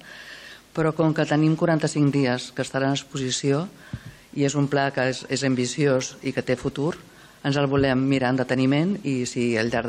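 Nothing in the audio stood out as a technical problem on listening.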